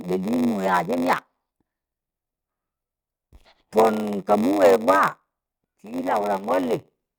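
Throughout, a block size mismatch (padded), consistent with 512-sample reads, zero-fills each block's end: a 93.8 Hz buzz, speech slowed to 0.938x, and periodic waveform gaps showing as vertical spectrogram stripes.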